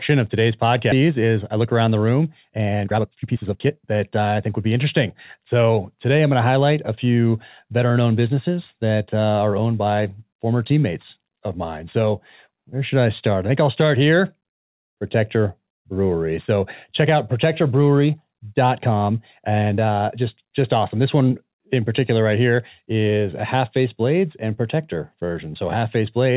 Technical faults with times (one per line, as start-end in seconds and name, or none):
0.92 skip ahead
1.02-5.46 jitter buffer speed-up